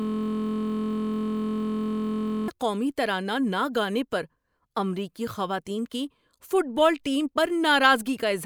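From the very start until 2.48 s, a system hang loop is already under way. The driver has frozen while the hardware keeps replaying one 23.22 ms slice, which fits a 1024-sample buffer. This gives a steady 43.1 Hz buzz rather than a stutter. Unlike a dropout or a random glitch, the repeats are exact and evenly spaced.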